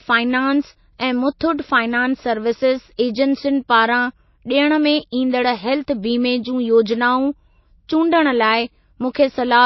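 Throughout the speech, nothing sounds above 5.8 kHz, and the sound has the dull, smeared texture of heavy MP3 coding. This is likely low-bitrate audio saved at a high bitrate. The loss points to an MP3 near 24 kbit/s. Re-encoding it higher restored nothing.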